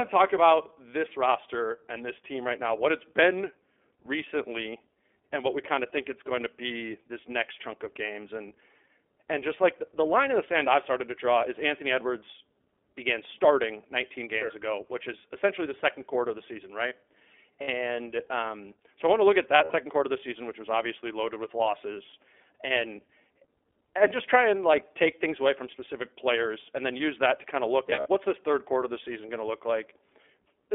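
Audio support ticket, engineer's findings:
iLBC codec, whole clip: speech band-limited to roughly 300 Hz to 3.5 kHz, plainly rough, slightly synthetic texture. Narrowband VoIP path; each 20 ms frame's excitation coded independently, nothing kept above 4 kHz. Coarseness fits the 20 ms mode at 15.2 kbps.

Lost iLBC frames, 17.62–17.69 s: 60 ms held buzzy vowel, consistent with three dropped 20 ms packets. Decoder repeats last pitch cycle plus noise. 19.56–19.73 s: 120 ms concealed across 160 ms, longest gap about 70 ms. 27.86–28.07 s: 140 ms across 200 ms, longest gap about 70 ms. Recovery immediate after each; frames decode standalone.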